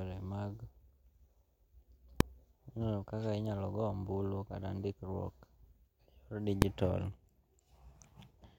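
At 2.20 s and 6.62 s, invalid numbers at full scale: a calculation blew up, pinning output flat at one extreme value for 1.45 ms, a single bang.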